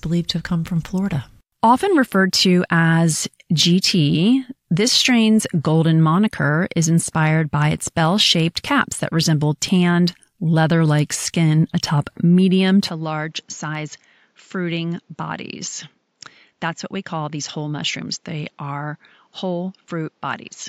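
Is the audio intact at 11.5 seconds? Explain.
Yes, the speech runs cleanly through 11.5 seconds, with no audible fault at that moment.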